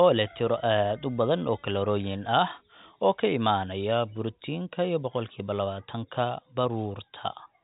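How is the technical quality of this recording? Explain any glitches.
The speech has no glitches; it carries the narrow band of G.711 telephone coding, with nothing above 3.8 kHz.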